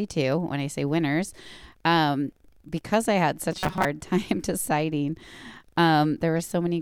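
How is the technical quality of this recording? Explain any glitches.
One glitch affects the recording: robotic sound from repeated short buffers, from 3.52 to 3.85 s. Audio likely arrived too seldom, so a tiny slice, about 5 ms to match the pitch, was replayed over roughly half that stretch. This locks the speech into a rigid, metallic buzz at 188 Hz.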